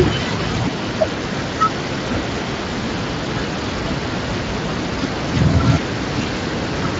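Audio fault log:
throughout: Speex codec. The speech carries a plainly audible hoarse, noisy grain because this CELP coder cannot model the excitation behind each sound finely at its setting. The degree of damage points to a Speex stream of roughly 20 kbps.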